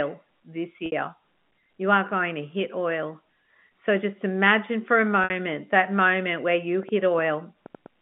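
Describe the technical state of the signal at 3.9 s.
At 3.9 s the audio is intact, with no fault present, only the narrow telephone band of the G.711 line.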